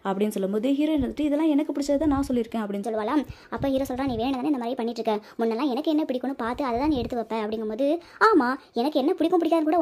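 From 2.83 s to the end the audio turns hurried and high, roughly three semitones up: a section at the wrong speed, running 1.21 times fast, likely from playback against the wrong clock.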